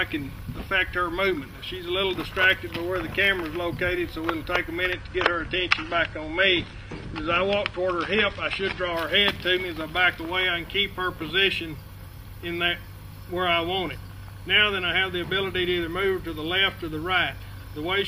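From 4.93 to 8.93 s the adaptive stream switches to a lower bitrate, consistent with AAC dropping from 96 to 32 kbit/s. Quality changes abruptly without a gap, coding artefacts increase, and nothing remains above 9.7 kHz until the higher-rate stream returns.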